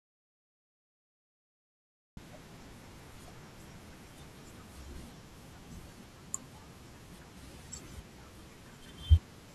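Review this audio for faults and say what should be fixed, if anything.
Audio dropout to silence from the start to 2.17 s: input likely lost, silence written, giving a flat waveform and blank spectrogram without room tone. Confirm connections, levels and mute states before recording starts.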